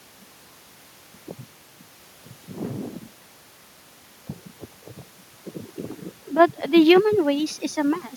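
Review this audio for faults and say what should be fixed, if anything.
Nothing here needs fixing, since the speech comes through without any technical problems and the faint room noise underneath sits about 36 dB below it.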